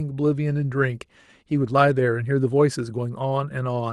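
There are no technical faults to describe in this speech.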